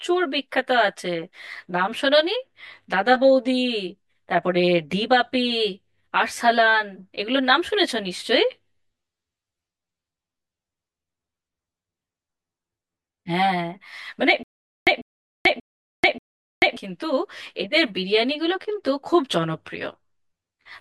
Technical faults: channel delay (comb filtering); stutter with silent gaps

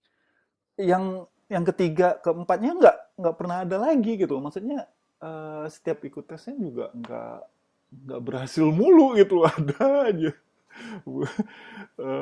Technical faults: wrong sample rate

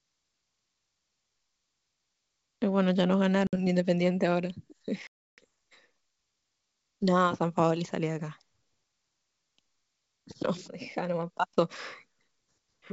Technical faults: packet loss on an ADPCM call

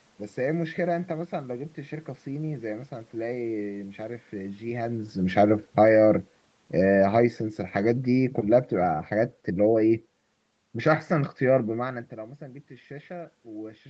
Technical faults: automatic gain falling

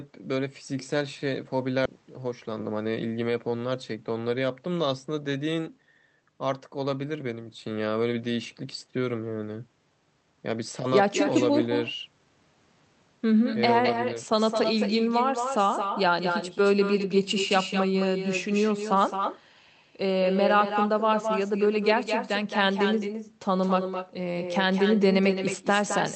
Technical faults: echo with no canceller; skip ahead; jitter buffer speed-up

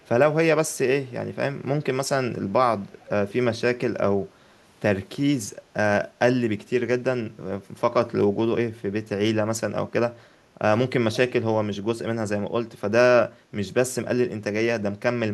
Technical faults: echo leak; background gated by the echo canceller

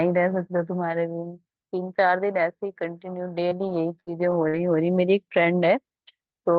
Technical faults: repeated packet loss (robotic sound)

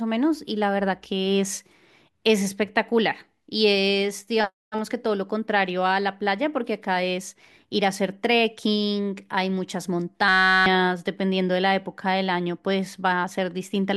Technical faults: system hang loop

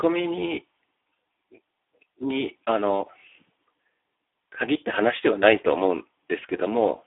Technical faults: Speex codec

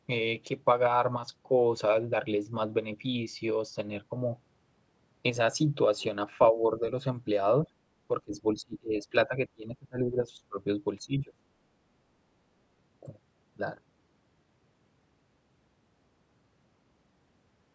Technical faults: speech suppressed in double talk

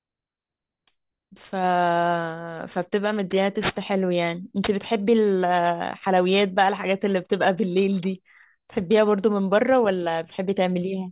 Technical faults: aliasing

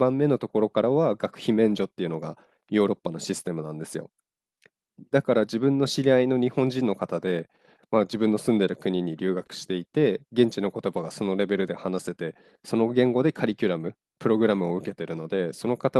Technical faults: none

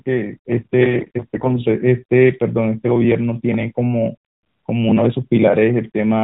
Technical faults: AMR bit errors

